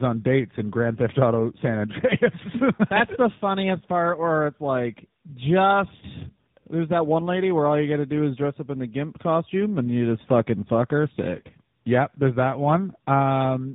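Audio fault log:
Throughout, tandem speech coding: two speech codecs in a row recoded the speech, which fits GSM full rate then AMR-NB, compounding roughness and warble. The spectrogram shows smeared harmonics and nothing above 3.8 kHz.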